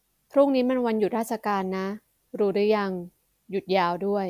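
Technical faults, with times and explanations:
No technical faults can be heard in the speech recording; the signal stays steady and intact from its first moment to its last.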